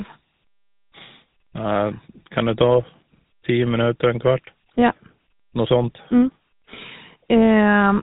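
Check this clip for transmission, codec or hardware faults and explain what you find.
One fault is present, running through the whole speech clip. GSM full-rate codec, throughout: the vocal tract is modelled and driven by regularly spaced pulses, consistent with roughly 13 kbps, nothing above 3.8 kHz, giving a plainly buzzy, gravelly roughness.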